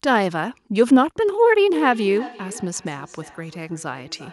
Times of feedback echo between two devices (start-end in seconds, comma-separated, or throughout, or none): 1.70-4.32